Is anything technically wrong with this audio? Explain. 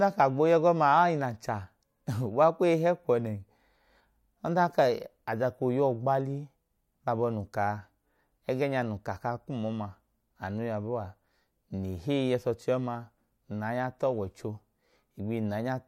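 No, nothing technically wrong can be heard in this recording.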